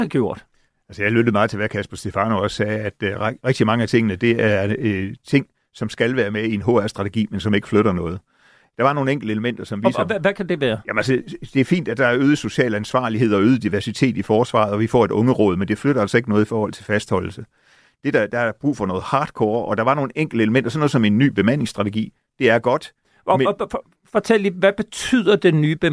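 No technical faults can be heard anywhere in this speech recording.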